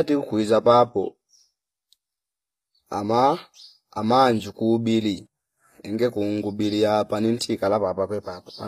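Throughout the speech, the treble sounds synthetic and gritty, with s sounds turning lispy and nothing above 14.9 kHz, likely HE-AAC compression at a bitrate near 24 kbps. Unlike a plain lowpass, the treble remains bright but is rebuilt from lower bands.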